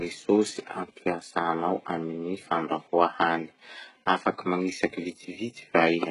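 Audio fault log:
Throughout, HE-AAC compression: the speech appears to have gone through a low-rate encoder that coded only the lower band and synthesised the treble by copying lower bands upward under a coarse envelope, likely HE-AAC v2 at a bitrate near 12 kbps. Damage is heavy. Because the rebuilt top does not match the real harmonics, s sounds turn gritty, lispy and metallic, and nothing is present above about 11.1 kHz.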